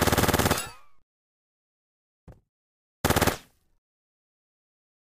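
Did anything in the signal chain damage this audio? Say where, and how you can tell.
Yes. The audio was read two samples at a time, a sample-format conversion fault, present throughout. Everything runs at double speed and an octave (12 semitones) high. A simple sample-rate mismatch would shift pitch cleanly, without the aliasing that reading samples in pairs can add.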